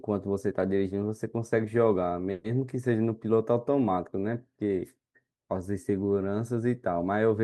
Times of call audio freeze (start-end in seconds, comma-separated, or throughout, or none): 2.31-2.46